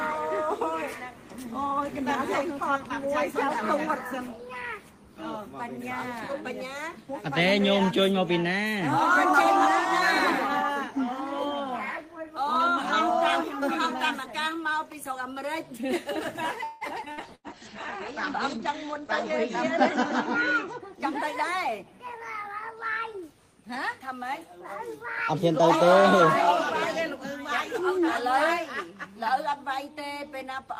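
The audio has a dense cluster of network faults between about 16.6 and 22.7 s. At 16.63 s the sound stops for about 177 ms and is held as a fading buzz or hiss. Then it resumes exactly where it left off. This is a call audio freeze, likely from late packets draining the jitter buffer. From 17.05 to 17.09 s a skip ahead occurs. Roughly a tenth of a second is dropped, and the two sides are joined almost directly. Two bursts of packet loss follow, at 17.12 to 17.20 s and 17.35 to 17.47 s. Each loses 60 ms, which is bridged by a concealment tail that fades before playback jumps on. A call bitrate drop runs from 17.14 to 20.86 s. The encoder falls from 32 to 12 kbps and stays at its lowest for 2.2 s. Bandwidth shrinks from 20 kHz to 8 kHz, so the sound turns muffled and coarse. From 17.55 to 17.71 s a jitter buffer slow-down plays the audio at 80% speed. Repeated pitch periods add 41 ms and drag the sound out at the same pitch. 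From 20.68 to 22.72 s a jitter buffer speed-up runs at 104%. About a tenth of a second is trimmed away.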